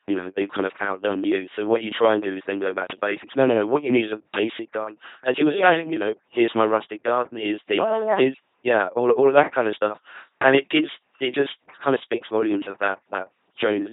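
From start to end, the speech runs through an LPC-10 vocoder, and the damage is heavy. The voice sounds buzzing and mechanical, like a robot. Each moment is rebuilt as either fully voiced or fully unvoiced. A pulse train or noise drives a simple vocal tract filter of up to ten poles. Nothing remains above 3.8 kHz. The sound fits a 2.4 kbit/s LPC-10 coder.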